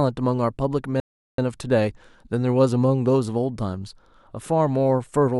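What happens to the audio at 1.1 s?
At 1.1 s the player is in a rebuffering stall: it has used up the audio it had downloaded and halts playback while waiting for more data to arrive. The speech drops to silence from 1.0 s to 1.38 s, then picks up exactly where it broke off, with nothing skipped or repeated. No material is lost, but the pause inserts about 382 ms of dead air into the clip's timing.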